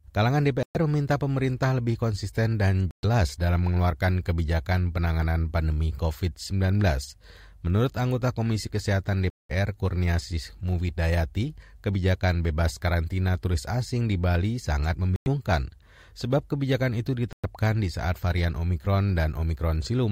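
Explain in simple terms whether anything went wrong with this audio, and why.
Yes, the speech briefly goes silent five times, at 0.63, 2.91, 9.30, 15.16 and 17.33 s, each gap about a tenth to a fifth of a second. The likely cause is a Bluetooth stall: the wireless link paused, then resumed where it left off or slightly later.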